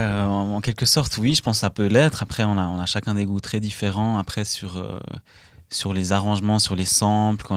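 No technical faults are audible.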